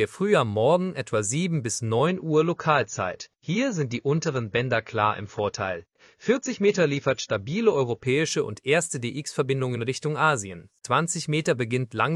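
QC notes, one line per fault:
2.07–8.07 s, adaptive stream at a lower bitrate: for six seconds the audio switches suddenly, with no gap, to a leaner encoding, which points to a drop from about 96 kbit/s AAC to about 24 kbit/s while the connection slowed. Codec artefacts rise and the treble is cut away. On a spectrogram the content above 7.1 kHz vanishes as a hard-edged block at both boundaries, while the waveform stays continuous across each switch.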